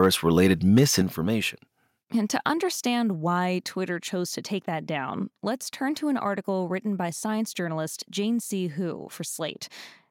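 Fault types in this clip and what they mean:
Microphone overload: The input level was likely set too high, so the loudest peaks ran past the top of the converter's range, by about 2 dB and about 3 dB, and had their tops sliced flat. Here it appears as a brief harsh crackle at 0.02 to 0.06 s and a longer gritty, buzzing edge from 0.76 to 1.0 s, with only a small share of the waveform actually flattened.
Microphone volume stepped down: The call software likely reacted to that overload by cutting the device's input gain in a single jump rather than easing it down. At 1.02 s, immediately after the second distorted stretch, the speech and the background around it both drop by about 6 dB at once, an abrupt fall in loudness that holds from that point on.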